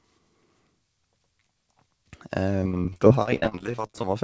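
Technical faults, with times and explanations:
2.61–4.04 s, repeated packet loss (robotic sound): the speech turns choppy, broken by dozens of brief holes up to 28 ms long. Each hole is filled by extending the preceding sound, so about a third of this stretch is patched-over fill.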